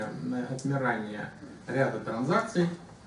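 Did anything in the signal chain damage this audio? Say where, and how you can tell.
No, nothing in the signal chain damaged this audio.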